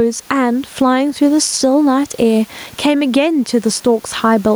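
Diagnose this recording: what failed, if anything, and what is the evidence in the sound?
Gain pumping throughout: the gain dips around 10 dB under loud sounds, giving a breathing waveform envelope. The likely cause is excess gain driving a fast call-processing limiter.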